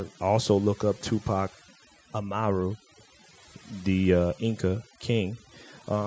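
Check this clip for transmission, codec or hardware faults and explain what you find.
Three faults affect this speech clip, one present throughout and two in brief moments.

Overdone noise removal, throughout: a noise reducer set too aggressively switches off individual frequency bands whenever they sit near its noise estimate, taking quiet parts of the speech with them. The background becomes near-silent with twinkling specks.

Background gated by the echo canceller, from 2.79 to 2.93 s and again from 4.87 to 5.01 s: while the far-end loudspeaker was active, the echo canceller pulled the microphone down hard, by about 40 dB at its deepest. The room sound drops out for roughly 150 ms each time, then returns.

Echo leak, from 2.96 to 3.04 s: a very faint, brief scrap of the voice repeats 258 ms behind the original, at roughly 35 dB below the speech. This is likely residual loudspeaker pickup that the far side's echo canceller failed to remove and sent back down the line. 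The call's microphone processing, with nothing above 8 kHz, is normal band-limiting rather than a fault.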